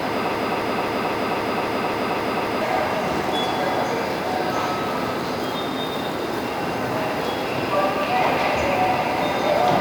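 From 0.35 s to 2.62 s the audio stutters like a broken record: a fragment of about 0.26 s plays over and over, back to back, nine times in a row, with identical content each pass and no progress through the sound. Whatever should have been heard during those two-odd seconds is simply missing. This broken-record loop most likely comes from a stalled player, encoder or stream that kept resending the last buffered piece until it recovered.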